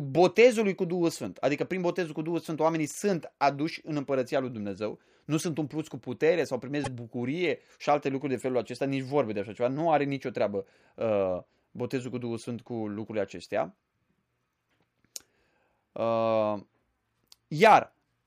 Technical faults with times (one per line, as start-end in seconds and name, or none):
6.83-6.88 repeated frames